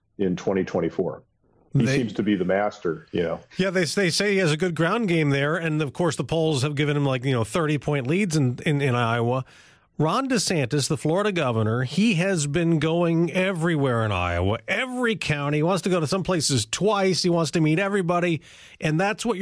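No technical faults are audible.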